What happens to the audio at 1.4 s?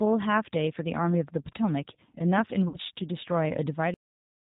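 At 1.4 s, as throughout, a G.729 codec rebuilds the speech from a vocal tract model, cutting everything above 4 kHz and leaving it plainly rough and synthetic.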